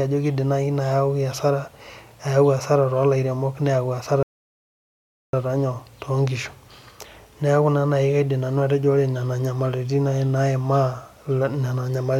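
Speech that drops into dead silence at 4.23 s and picks up again at 5.33 s, continuing exactly where it broke off with nothing skipped. This is a rebuffering stall: the player exhausted its downloaded audio, paused until more data arrived, and added about 1.1 s to the playback.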